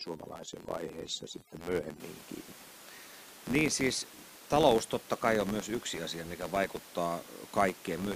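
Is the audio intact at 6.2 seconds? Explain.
No. A filter restarted on every block runs throughout the clip, starting each block from silence and giving an 86.1 Hz buzz that follows speech level, unlike steady hum.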